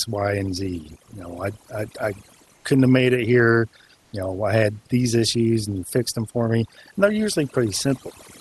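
Overdone noise removal runs through the whole recording. The room noise sits about 41 dB below the speech, and the reduction is set too strong for it. Bands near the noise floor are pushed far down, taking quiet parts of the voice with them. The background drops and breaks up into twinkling specks.

From 2.56 to 2.64 s, between "know I I I" and "couldn't have made it", comfort noise in place of the background is heard. For 80 ms the real background, about 40 dB below the loud parts, turns into a steady, featureless hiss at the same level. The likely cause is Opus discontinuous transmission filling the pause with synthetic noise.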